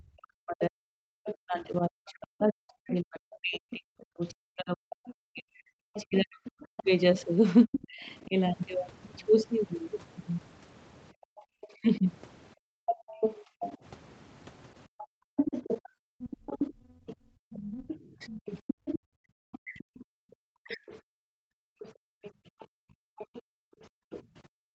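A speech recording over a call path band-limited to 8 kHz, with three recurring faults. Speech suppressed in double talk: the talker dips by up to roughly 40 dB from 0 to 8.34 s, by about 30 dB briefly between 11.42 and 13.5 s, and again between 16.81 and 20.81 s, likely because the echo canceller mistook simultaneous talk for echo. The other side's voice leaks through at about 10 dB below the talker at 1.25–1.67 s, 5.06–8.25 s, and from 11.61 s to the end, likely residual loudspeaker echo the canceller failed to remove. Background gated by the echo canceller: room sound drops by about 40 dB in patches between 11.12 and 13.08 s and from 14.88 s onward, as the canceller clamps the microphone during loudspeaker playback.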